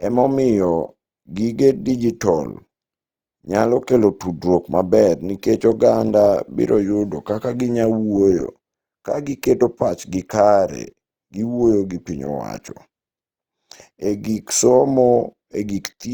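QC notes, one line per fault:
Throughout: Opus compression. The speech sounds rough and grainy, and some sounds come across noisy rather than clean, with little swirling and few hollow gaps. The likely cause is the codec's music mode running short of bits. It keeps each band's energy but fills bands it cannot code exactly with folded copies of lower bands or with noise. The damage is plainly audible, which fits a low bitrate near 24 kbps. Bandwidth stays full, reaching about 20.3 kHz.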